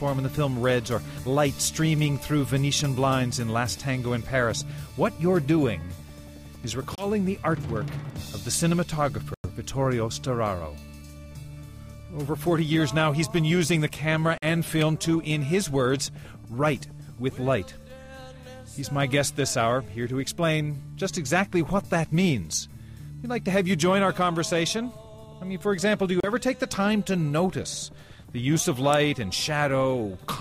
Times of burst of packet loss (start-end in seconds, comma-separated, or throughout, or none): none